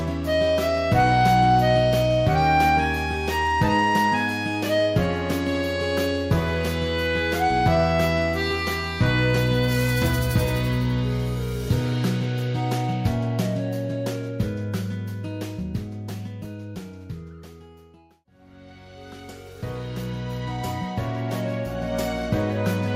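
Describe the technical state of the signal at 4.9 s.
At 4.9 s the signal is intact, with no audible fault at that moment.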